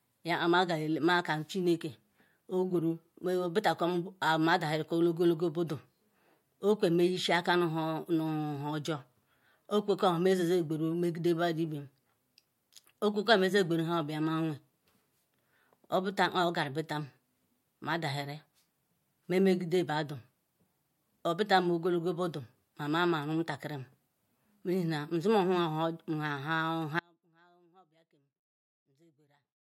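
Audio dropout to a faint residue from 27.00 s onward: speech cuts off abruptly to a faint trace, likely a dropped feed into live inputs.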